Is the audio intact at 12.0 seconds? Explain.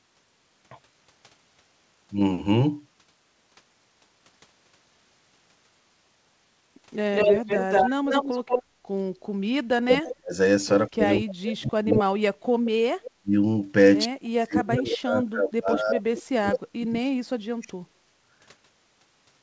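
No. At 12.0 s the sound is dipping in and out, the speech suppressed in double talk that runs from 10.88 to 12.33 s. The echo canceller likely could not separate this talker from loudspeaker echo while the far side spoke, so it turned everything down. The drops total about a second, the deepest about 35 dB. The waveform shows the envelope collapsing in chunks, and a spectrogram shows gaps and stripped-away upper harmonics.

Overlapping this, from 11.9 to 12.03 s, is an echo leak. A copy of the speech arrives 183 ms late, only about 5 dB below the direct sound, likely because loudspeaker echo was not fully cancelled before being sent back. It is heard as a short doubling. On a spectrogram it appears as a shifted repeat of the same harmonic pattern, and the waveform shows a smeared second burst trailing the first.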